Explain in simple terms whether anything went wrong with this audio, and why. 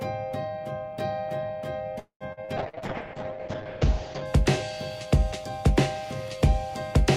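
A few things go wrong, mostly bunched in the middle.

From 1.99 to 2.24 s the sound stalls: the last bit stretches into a fading buzz, then about a tenth of a second of silence. That's likely a call audio freeze, where delayed packets let the receiver's buffer run dry.

Right after, at 2.33, 2.45 and 2.69 s, there are tiny smears or wobbles. Each is a short concealed packet loss, where roughly 40 ms went missing and got patched over.

From 2.60 to 4.32 s everything turns rough and muffled, with the top end cut off above 8 kHz. That's a call bitrate drop, where the connection squeezed the encoder down hard before recovering.

From 5.80 s to the end, a steady raspy mains buzz sits underneath. That's 50 Hz electrical interference and its harmonics leaking in.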